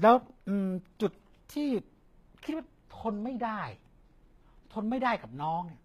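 Right through the clip the speech carries plainly audible HE-AAC compression damage, likely at a low bitrate around 20 kbps. The treble is synthesised from lower bands rather than coded, so its harmonics don't line up, and s sounds come out gritty and metallic.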